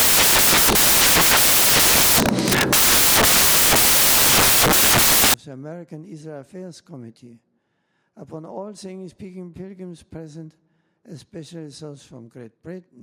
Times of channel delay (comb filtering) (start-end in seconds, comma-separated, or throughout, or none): none